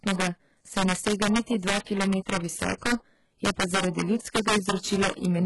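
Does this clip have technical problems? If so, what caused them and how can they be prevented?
Yes. Integer overflow runs through the whole speech clip: the loudest peaks crack sharply instead of flattening. The signal was driven about 6 dB past the integer limit, and the arithmetic wrapped those samples to the opposite sign rather than holding them at the ceiling, so each overload jumps across the full range. Only a small share of samples go over, so the damage lands on peaks as cracks rather than a continuous buzz. Prevent it by using saturating arithmetic or a limiter before conversion to integer.

HE-AAC compression, also throughout, is the likely cause of the heavily coded sound. Nothing is present above 11.5 kHz, and the treble below that is synthesized: spectral band replication copies lower bands upward and fits them to a coarse envelope, so its harmonics don't match the real ones across the crossover, giving sibilants a gritty, metallic edge. 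The degree of damage fits a very low bitrate, around 12 kbps. Prevent it by encoding speech at a higher bitrate or with a codec that doesn't rely on band replication.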